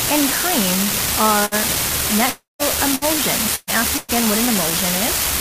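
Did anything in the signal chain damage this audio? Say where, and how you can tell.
Yes. At the converter or digital interface, an unreliable data bit produces a steady crackle that continues through pauses: one marginal data line flips, adding equal-sized spikes.

On the network, bursts of packet loss occur at 1.45–1.54, 2.95–3.04, 3.55–3.70 and 3.97–4.11 s. Concealment extends the last sound and fades it, skipping 60–120 ms.

From 2.29 to 2.62 s the sound is held and faded, then silent for about 150 ms, resuming 300 ms later; likely a long network dropout.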